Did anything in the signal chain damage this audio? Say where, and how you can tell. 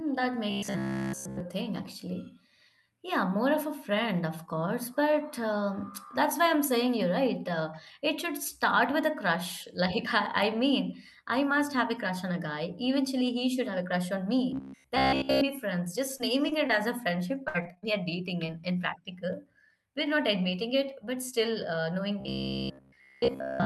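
Yes. Robotic sound from repeated short buffers, likely a driver or buffer underrun, runs 0.50–1.40 s, 14.51–15.41 s, and from 22.20 s after "but still uh knowing" to the end. Its steady 66.8 Hz buzz fits a roughly 15 ms buffer looping, unlike irregular network loss.

Short concealed packet loss on the network causes brief smears of about 20 ms at 16.17, 16.49, 16.67 (before "as a") and 18.46 s (before "in practical"). These are isolated smears, with no sustained buzz.

Repeated packet loss (robotic sound) runs 17.45–17.84 s. Five gaps drop about 160 ms, the longest 59 ms. The result is choppy and uneven, not the fixed-pitch drone of a looping buffer.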